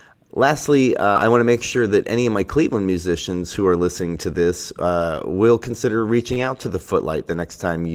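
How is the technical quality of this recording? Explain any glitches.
The recording has packet-loss damage at four points. Concealed losses and rebuilt packets leave brief rough patches in the speech.

Short concealed packet loss occurs at 1.13–1.17 s (20 ms missing) and 6.33–6.38 s (40 ms missing). The decoder extended the preceding sound to cover each gap, giving a brief smear or wobble.

A lost packet rebuilt from error correction appears at 1.15–1.17 s, 3.59–3.65 s, 5.01–5.03 s and 6.36–6.57 s. Low-bitrate copies replaced those frames, so they sound rougher and noisier without gaps.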